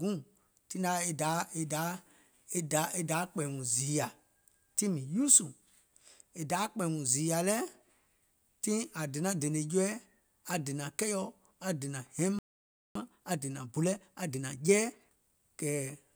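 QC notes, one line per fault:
12.39 to 12.95 s, playback stall: after "aŋ dènȧŋ hɛiŋ" the speech cuts to silence for about 0.57 s, likely the player starving for data or blocked.
12.95 to 15.21 s, time-compressed catch-up: speech then runs hurried at 1.25 times speed, pitch unchanged, as small pieces are cut and cross-faded to clear the backlog.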